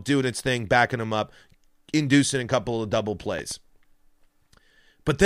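At 3.39 to 3.54 s, just after "a couple of double", a loud pop lands as two sharp thumps around 5 dB above the speech, likely from a voltage pulse; unlike a dropout, the speech continues underneath.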